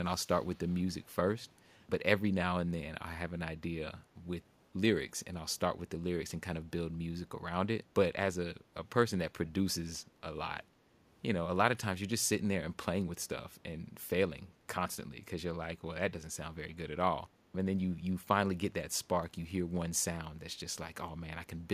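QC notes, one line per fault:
0.27–0.81 s, echo leak: a faint delayed copy of the speech trails the original by 390 ms, very low, far beneath the direct sound, likely from a loudspeaker's output reaching the far-end microphone past an incomplete echo canceller. The fixed delay separates it from room reverberation, which smears continuously rather than repeating.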